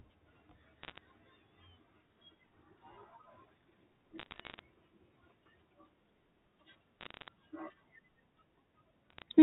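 Bit errors on a digital phone line crackle through the speech at 0.83–0.98 s, 4.18–4.59 s, 7.01–7.28 s and 9.10–9.22 s. Roughly one bit in two hundred flips on the G.711 line. Each flip corrupts a single sample, and hits on sign or high bits snap out as sharp ticks.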